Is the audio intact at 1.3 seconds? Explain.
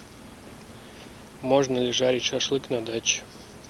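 Yes, the speech is intact at 1.3 seconds, with no dropout, glitch or other fault at that moment.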